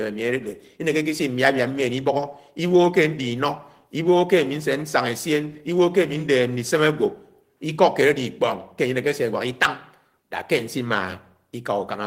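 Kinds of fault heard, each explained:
No technical faults can be heard anywhere in the recording. The speech carries on without any audible disturbance to report.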